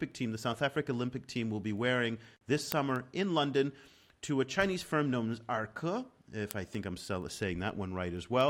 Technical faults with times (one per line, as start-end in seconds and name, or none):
0.12-8.41 word clock ticks